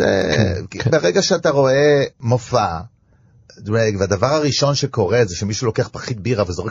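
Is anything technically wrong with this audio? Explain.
Yes. Throughout the speech, MP3 compression damage is plainly audible. The sound turns watery and swirly. Weak frequency components drop in and out between frames. That is likely a very low bitrate, near 32 kbps, starving the encoder of bits.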